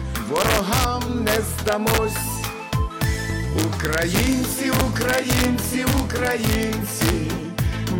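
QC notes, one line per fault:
0.16–0.85 s, 1.27–1.98 s, 3.02–3.04 s, 3.59–4.33 s, 4.73–5.45 s, 5.87–6.63 s, 7.01–7.10 s, integer overflow: peaks driven about 2 dB past full scale (about 1 dB at 3.02 s) wrap to the opposite sign instead of limiting, so each one jumps across the whole range, giving violent cracks far harsher than clipping.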